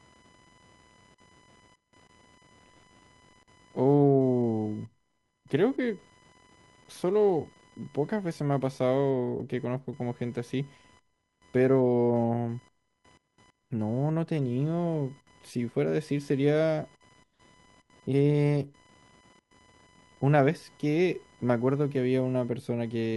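Throughout the speech runs computer activity noise: processor or peripheral load shifting the shared audio ground, giving a faint buzzing chirp pulsing at around 1 kHz, roughly 35 dB below the speech. On a spectrogram it shows as thin, regularly spaced vertical striations independent of the speech.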